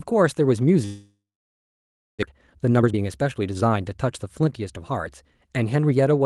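Speech that cuts out from 0.85 to 2.25 s, most likely because of a long network dropout. The receiver stretches the last sound into a buzzy tail that fades within a few tenths of a second. On a spectrogram that tail shows as smeared, repeating harmonic bands dying away, followed by a near-empty stretch of roughly a second. The waveform shows a decaying envelope and then a flat line. When the sound returns, the missing portion is gone rather than delayed. From 2.32 to 3.77 s a jitter buffer speed-up follows. The receiver is working off the backlog, about 0.4 s, that built up during the gap. It snips out short pitch-period slices so the audio plays at 124% speed with unchanged pitch, and the speech sounds hurried. The spectrogram shows syllables compressed in time with harmonic spacing intact. The waveform shows tiny splice points between cycles. Throughout, the Opus call path holds content below about 12 kHz.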